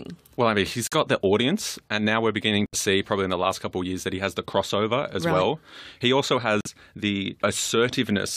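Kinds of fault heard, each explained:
Corrupt frame muted: damaged compressed frames were rejected by the decoder and replaced with silence. The speech cuts out abruptly at 0.85, 2.66 and 6.61 s, for 78, 88 and 64 ms. Each gap points to two or three lost frames. Timing stays intact.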